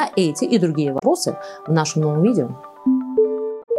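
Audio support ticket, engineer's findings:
Damaged data in the compressed stream: corrupted frames at 0.96–1.02 s and 3.59–3.69 s; decoder misreads them, loses sync, hunts for next frame header. Audible as short chirp, squawk, click or hole replacing the audio there. Check source file and transport integrity.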